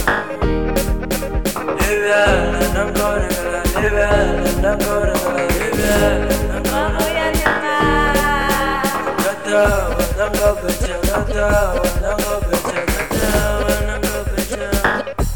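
Nothing is technically wrong with this clip.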